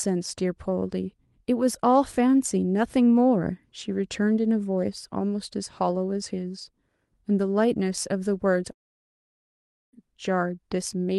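From 8.71 to 9.95 s, likely a long network dropout: speech smears into a fading buzz, then a blank spectrogram gap, and resumes with about 1.2 s lost.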